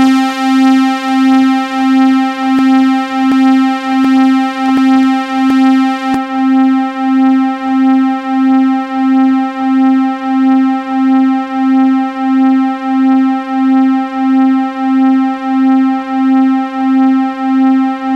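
From 2.59 to 6.14 s there's a broken-record loop: a 0.73 s fragment repeats five times back to back, likely a stalled player resending its last buffer.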